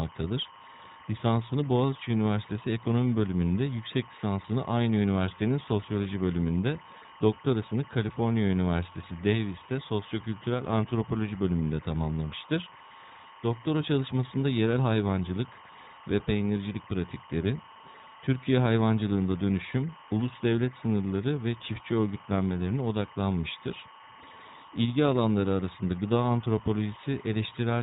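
From start to finish, timecode bleed sits behind the speech. Linear timecode has leaked in from a nearby track or cable. Its square wave flips between tones near 1 and 2 kHz at 25 frames per second. The result is a steady chirping warble, roughly 20 dB below the speech.

Throughout, the speech also carries iLBC codec damage. Each 30 ms frame is coded on its own, which fits the 13.33 kbps mode. Nothing above 4 kHz survives. The speech stays clear but sounds plainly rough and synthetic.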